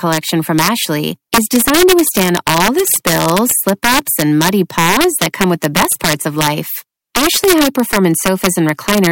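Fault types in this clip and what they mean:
Integer overflow: the speech is pushed about 6 dB past full scale, and instead of being limited, peaks wrap around to the opposite extreme. Under one percent of samples exceed the limit, but each one produces a sharp crack on louder syllables, harsher than ordinary clipping.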